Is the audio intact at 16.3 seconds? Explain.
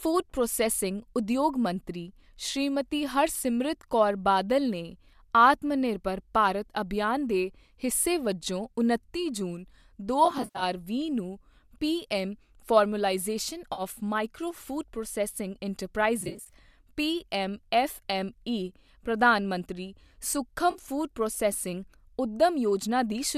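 No. AAC frame loss with concealment spans 16.21 to 16.54 s: about 170 ms of frames dropped across 300 ms, runs up to roughly 40 ms, filled from prior spectra, sounding smeared and phasey, with blurred, noisy patches across the harmonics on a spectrogram.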